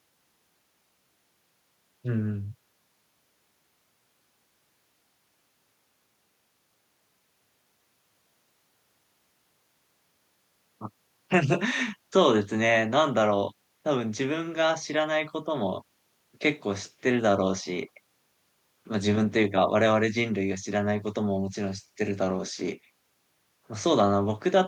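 No technical faults are audible.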